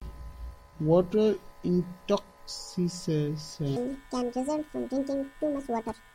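From 3.76 s to the end, the speech jumps into a section at the wrong speed: it runs about 1.77 times too fast, so it sounds hurried and squeaky, pitched up roughly ten semitones. Likely it was played back against the wrong clock.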